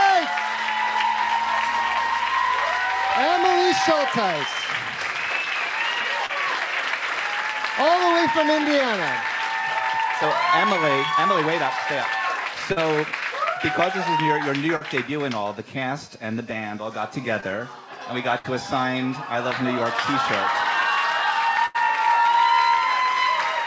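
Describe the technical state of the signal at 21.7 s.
A burst of packet loss runs from 21.66 to 21.76 s. Packets went missing or arrived too late to play, so the receiver filled a gap of about 84 ms by stretching the last received sound and lowering its level as the gap went on, which leaves a held buzz or a fading hiss rather than true silence. Playback then picks up about 80 ms further on, so that stretch of the original never arrives. Through the call path, nothing above 8 kHz is present, which fits a G.722 codec.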